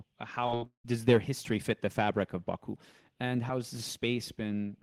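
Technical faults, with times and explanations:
0.46–0.85 s: repeated packet loss (robotic sound). Over this short stretch of speech the stream breaks up about five times in quick succession, and roughly 280 ms of audio never arrives. About 275 ms of the missing audio is patched by extending the last received sound, so around 71% of the span is synthetic fill. The longest hole is about 175 ms. Because stretched fragments keep replacing real speech, the passage sounds choppy.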